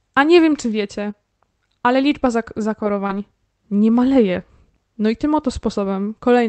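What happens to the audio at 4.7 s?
At 4.7 s the speech comes through intact, with nothing beyond the ordinary sound of the call codec path.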